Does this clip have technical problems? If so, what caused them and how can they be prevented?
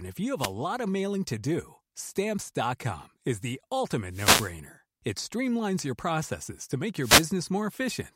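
Yes. Wireless microphone noise hits at 0.37 to 0.53 s, 4.09 to 4.54 s and 7.01 to 7.26 s: the FM radio link faded, so receiver noise surged over the speech as brief bursts of static. Diversity receivers, line-of-sight antenna placement and a shorter transmitter-to-receiver distance prevent these dropouts.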